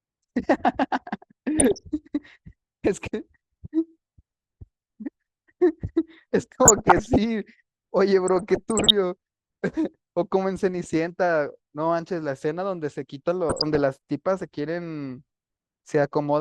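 Speech with four bursts of DAB burbling, at 1.59 to 1.79 s, 6.64 to 7.16 s, 8.28 to 8.91 s and 13.49 to 13.79 s, each bringing short blips of noise in single sub-bands over the voice. Weak reception lets bit errors of around a percent or less slip past error correction into the MP2 data, so corrupted scale factors make single sub-bands jump in level for up to a frame. A spectrogram shows scattered bright rectangular tiles in narrow bands.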